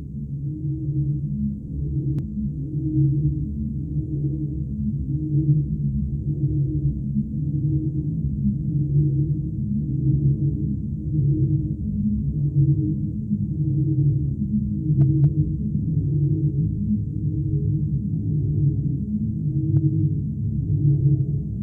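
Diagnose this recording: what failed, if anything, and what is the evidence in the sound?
The failure is in the compressed stream itself, so it's damaged data in a compressed stream, sitting at the codec stage. You get five short glitches: 2.19 to 2.22 s, 5.39 to 5.45 s, a single blip at 10.87 s, 15.70 to 15.75 s, and 17.98 to 18.01 s, each a short disturbance of tens of milliseconds at most. The decoder hits corrupted bytes, misreads or throws out those frames, and has to hunt for the next valid header before the sound locks back in.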